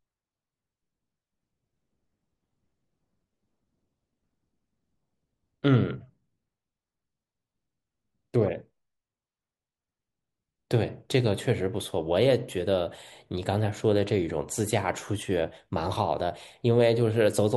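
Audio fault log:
Nothing to log here, since the speech in this clip comes through without any audible fault at any point.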